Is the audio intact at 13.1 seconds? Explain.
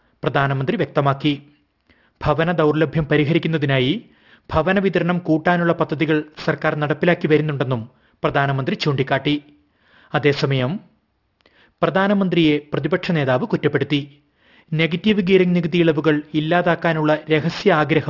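No, there's aliasing at 13.1 seconds, and it runs through the whole clip. Content above about 6 kHz folds back down to unrelated pitches, which points to a drop to a 12 kHz rate without filtering. Sibilant-type detail sounds gritty and metallic, sitting roughly 25 dB below the main sound.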